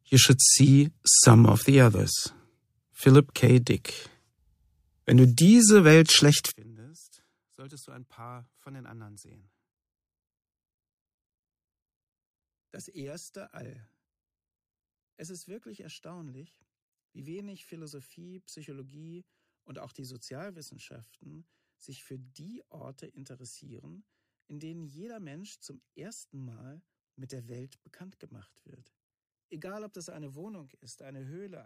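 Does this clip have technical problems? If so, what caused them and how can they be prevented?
Yes. From 6.51 s to the end, the sound collapses to about 29 dB below its earlier level and turns faint, with most of the centred content gone. This is likely one channel inverted: with one stereo side at reversed polarity, whatever the two channels share cancels when they are summed to mono, leaving only their small differences as a faint residue. To prevent it, check polarity on both channels and audition a mono fold-down before distribution.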